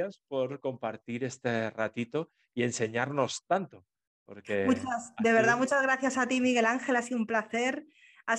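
Nothing in this speech recording stood out as a technical problem on listening.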